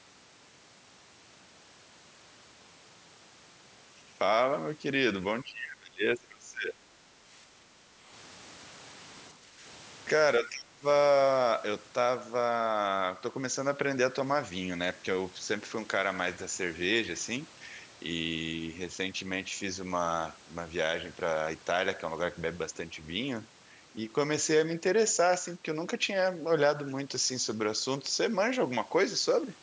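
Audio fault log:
5.43–6.83 s, 9.34–9.65 s, 10.39–10.85 s: speech suppressed in double talk. The voice sinks while the far side is speaking, by around 25 dB in the first span, about 30 dB in the last, and only about 5 dB in the short middle one. The likely cause is the echo canceller mistaking the near talker for loudspeaker echo and turning both down. Because it is the voice itself that dips, not just the room sound, this differs from gating.
7.46–8.09 s: background gated by the echo canceller. For a little over half a second, the room tone beneath the sound drops by about 7 dB and then returns. While the loudspeaker plays, the canceller clamps the microphone, so the ambience dips as a whole rather than any talker breaking up. The dip is milder than the 25 and 30 dB double-talk losses nearby.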